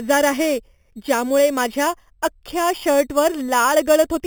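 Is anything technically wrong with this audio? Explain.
Yes. Throughout the speech there is imaging from sample-and-hold upsampling. The sound points to an 8 kHz original raised to 48 kHz by simply repeating each sample without a smoothing filter, so mirrored copies of the spectrum appear. The lowest copy fills 4 to 8 kHz, about 15 dB below the signal, as a bright metallic fizz that rises and falls with the speech. Unlike steady hiss or harmonic distortion, this band moves opposite to the voice's pitch.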